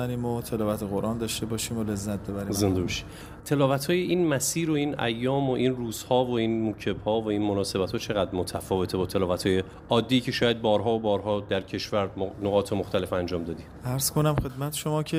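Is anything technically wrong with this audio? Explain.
No, there is nothing technically wrong with this audio.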